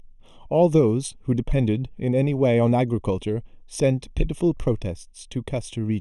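Throughout the speech, channel delay (comb filtering) gives a hollow, phasey tone. One channel trails by roughly a third of a millisecond, so summing to mono cancels energy with a first notch near 1.5 kHz. Unlike a flanger's sweep, these notches never move.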